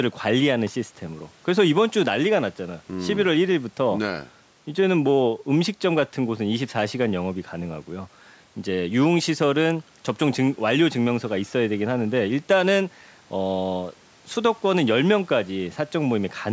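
No technical faults are audible.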